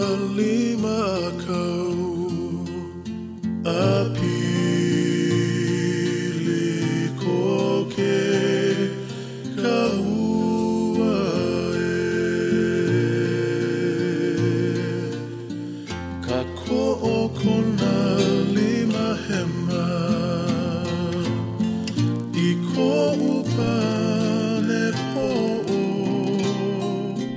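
From 21.84 to 26.48 s a rough 25 Hz buzz rides on the sound, the mark of a resampler restarted on every block. Each 40 ms block was converted in isolation, which fits a 48 kHz to 16 kHz conversion, leaving an error at every edge. The waveform shows small discontinuities every 40 ms, and the spectrogram shows faint vertical lines at the same spacing wherever signal is present.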